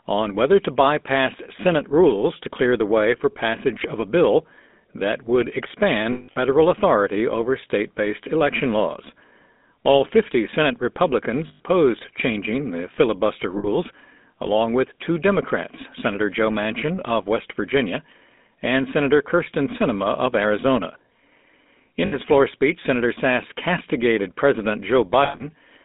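Speech squeezed through the GSM full-rate codec, at 13 kbps by the sound of it, so everything sits in a narrow 200 Hz to 3.7 kHz band with an obvious buzzy, gravelly roughness from the pulse-driven vocal tract model. On top of that there are lost GSM frames, where the decoder holds the last good sound and lets it decay into a rough metallic ring: 6.12 to 6.38 s, just before "authority over state based" (about 200 ms gone in patches, the longest run around 150 ms); 11.48 to 11.61 s; 13.58 to 13.66 s, right after "changing the filibuster"; 22.06 to 22.16 s, just before "floor speech"; and 25.24 to 25.44 s.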